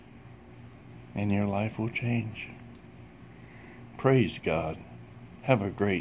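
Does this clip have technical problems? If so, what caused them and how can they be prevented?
No, nothing stood out as a technical problem on listening, so there is no cause to explain or prevent.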